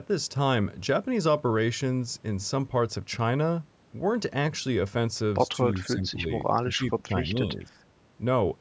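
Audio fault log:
5.64–6.28 s and 6.61–7.83 s: speech suppressed in double talk. The speech dips about 10 dB, then up to about 20 dB in pieces. Likely an echo canceller turning down both sides.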